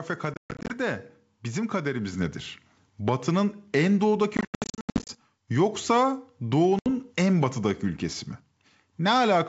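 Packet loss on an ADPCM call begins at 0.34 s and runs to 0.78 s. Around 250 ms of audio went missing in scattered gaps across about 360 ms, the longest run 130 ms, which points to a few dozen lost packets. Each gap was filled with silence. The receiving decoder's adaptive predictor and step size then no longer matched the sender's, so the speech cuts out abruptly and comes back slightly distorted, before settling.

At 2.13 s the microphone volume is stepped up. The call software raised the device input gain in a single step, so the speech and background both jump together by about 5 dB.

A heavier burst of the same ADPCM packet loss runs from 4.37 s to 5.14 s. Roughly 520 ms is lost across about 720 ms, in many holes of up to 90 ms, pointing to around fifty packets. The choppy dropouts each end with the same mistracked, slightly distorted recovery.

A short loss from 6.79 s to 6.88 s removes about 70 ms, a handful of packets, leaving a hard-edged gap and a rough restart.

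Throughout, the wideband G.722 coding keeps the speech bright, with at most a faint upper-band hiss.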